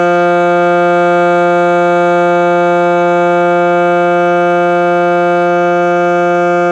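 No technical faults can be heard anywhere in this music. Nothing in the audio points to a problem in how it was recorded, processed or delivered.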